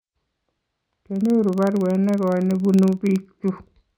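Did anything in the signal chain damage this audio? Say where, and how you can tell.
Yes. A filter restarted on every block in the buffer processing stage leaves a tick train at 21.5 Hz across the speech, tracking its level, which fits 2048-sample blocks.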